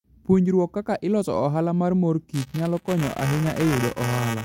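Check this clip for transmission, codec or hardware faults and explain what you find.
One hardware fault is present: buffer tearing, starting at 2.33 s, right after "mar mor", and lasting to the end of the clip. The writing program and the playback hardware have drifted so that their positions cross inside each period. A small slice of every buffer replays audio a few milliseconds old, with hard joins on both sides. This produces a rattling, robotic buzz at 345 Hz, which fits a 128-sample buffer. A spectrogram shows evenly spaced vertical striations and a 345 Hz harmonic comb over the speech. The waveform shows regular step discontinuities about 2.9 ms apart.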